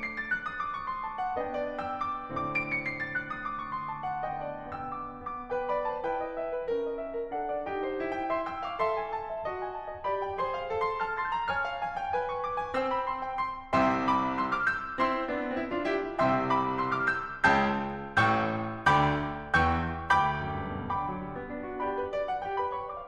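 No technical faults can be heard anywhere in this music recording. Nothing breaks into the sound at any point, so there is no fault event to place in time.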